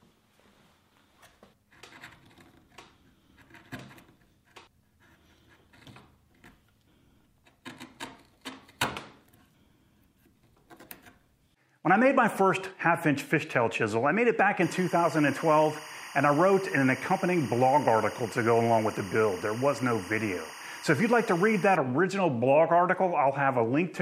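From 14.62 to 21.76 s, 24 fps timecode leaks in from a neighbouring line. This timecode bleed adds a chirping warble near 1 and 2 kHz, about 20 dB below the sound.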